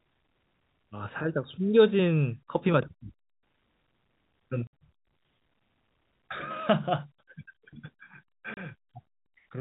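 At 4.67 s the speech drops into a hard gap of about 60 ms, and at 8.54 s a second gap of about 30 ms follows. This is packet loss filled with silence. Whole packets never arrived, and the receiver played silence in their place. Both gap lengths are multiples of 10 ms, which fits a 10 ms packet size. The abrupt cut-out and return give each hole hard edges, all within G.711's 4 kHz telephone band.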